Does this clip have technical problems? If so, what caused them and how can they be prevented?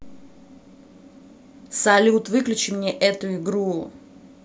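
No, the speech signal holds steady throughout, with no dropouts, distortion or other technical faults to be heard.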